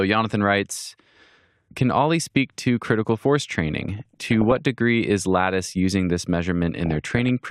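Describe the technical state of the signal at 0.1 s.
At 0.1 s the signal is intact, with no audible fault at that moment.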